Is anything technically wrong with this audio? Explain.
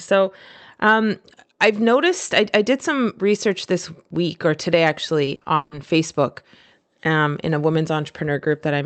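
Yes. Between 5.25 and 5.73 s there is repeated packet loss, which gives a robotic sound. Across four gaps, the longest 160 ms, the decoder fills the holes by extending the last received sound, so over half the span is concealed. The speech turns choppy, with pieces missing. On a spectrogram it shows as smeared, frozen harmonic bands with breaks, and the waveform shows repeated, oddly uniform cycles.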